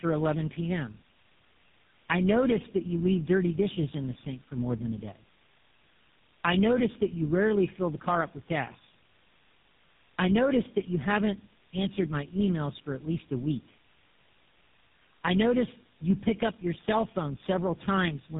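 From start to finish the call shows tandem speech coding: it was decoded and re-encoded at each network border, with three low-rate speech coders in a row, which fits a chain like GSM full rate into AMR-NB at 6.7 kbit/s and back into GSM. Each coder compounds the last one's errors, so the speech sounds rough, muffled and warbly, and nothing above 3.7 kHz survives.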